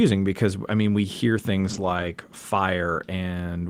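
A speech recording with a lost packet rebuilt from error correction between 1.57 and 2.11 s. There's no gap, but the sound turns rough and noisy. This points to about 14 packets (roughly 280 ms) replaced by low-bitrate backup copies. A spectrogram shows continuous energy with a coarser, grainier texture there.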